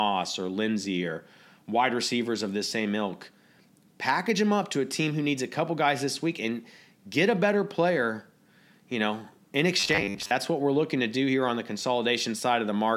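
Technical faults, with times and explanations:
9.80–10.32 s, robotic sound from repeated short buffers: new audio likely arrived too slowly, so the playback filled gaps by replaying the last 10 ms slice for roughly half of this stretch, skipping real speech and forcing a rigid, metallic 100 Hz buzz over it.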